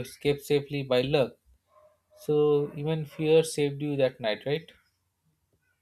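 Speech recording with no audible technical faults anywhere in the signal.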